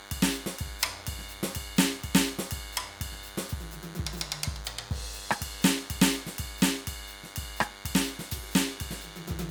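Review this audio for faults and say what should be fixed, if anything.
There's a DECT cordless phone buzz running under the music the whole way through: a thin, steady 100 Hz tone with lots of harmonics, sitting around 20 dB below the music. A nearby DECT handset or base fires a radio burst every 10 ms, and the audio circuitry rectifies those bursts into that buzz. Keep DECT phones and base stations well away from the recording chain, and use shielded, properly grounded cabling.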